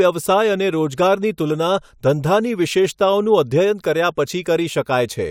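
Nothing technically wrong turns up in this bit of speech; there's no fault here to point to or explain.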